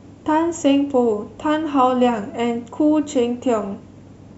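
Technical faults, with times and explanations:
Nothing here jumps out as a technical problem; the speech comes through without any glitch worth flagging.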